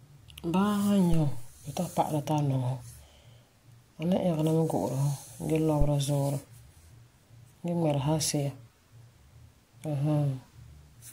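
A supply switched on or off on a live input, its step passing through the coupling capacitors, causes a phantom power thump at 1.13 to 1.61 s: a deep thump peaking about -17 dBFS, decaying over about 108 ms. Another at 5.81 to 5.90 s peaks about -13 dBFS and dies within 20 ms.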